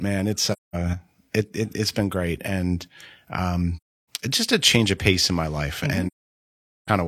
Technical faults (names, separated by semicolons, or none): AAC frame loss with muting